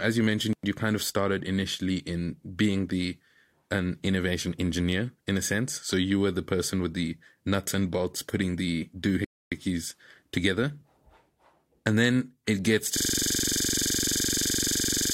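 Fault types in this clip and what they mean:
Playback stall: After "and bolts putting the", the speech drops out for about 0.27 s at 9.25 s, likely because the player ran short of data or its thread was blocked.
System hang loop: From 12.97 s, just after "then it gets to", a 42.67 ms slice repeats at 23.4 Hz until the end. That repetition fits a frozen system replaying a 2048-sample buffer.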